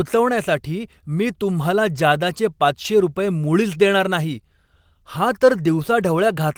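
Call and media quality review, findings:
No faults found in the speech recording. Nothing to raise against any component in the call or media path.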